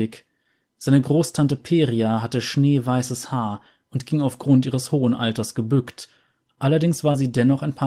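A speech clip with one short concealed packet loss at 7.11 to 7.15 s: about 20 ms of audio never arrived, and the receiver filled roughly 21 ms by extending the preceding sound before blending back, heard as a brief smear. On a spectrogram, harmonics or noise run unnaturally flat through that gap; the waveform shows the preceding sound continued across it.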